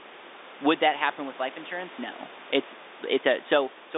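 No faults are audible in the speech: room noise sits about 18 dB beneath it, and the band runs from 300 Hz to 3.7 kHz, which fits ordinary G.711 telephone coding.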